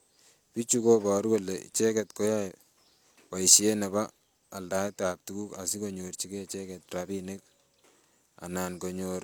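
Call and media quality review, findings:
Low-bitrate audio saved at a high bitrate, throughout: speech keeps the coarse coding artefacts of an earlier lossy pass, with nothing above 20.2 kHz. Likely a low-rate HE-AAC encode, roughly 48 kbit/s, re-encoded as high-rate MP3, which cannot restore the removed detail.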